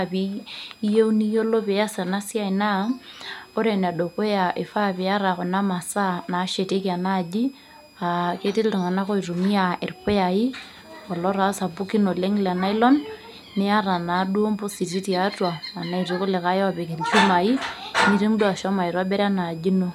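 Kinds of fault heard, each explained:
Switching supply whistle: A switching power supply is running in an audible burst mode, or beating against another supply, and its noise leaks into the audio path. Here it shows as a faint, high whistle under the speech for the whole clip. The pitch wanders between about 2.34 kHz and 2.58 kHz rather than holding steady. It sits roughly 30 dB below the speech, so it is quiet but always present.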